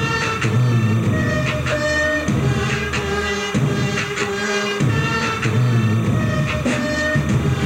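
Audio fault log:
Throughout, timecode bleed: a steady chirpy warble sits maybe 15 dB under the sound, flipping between tones around 1 kHz and 2 kHz. That's linear timecode leaking in from a nearby track or cable, its square wave ticking along at 30 frames per second.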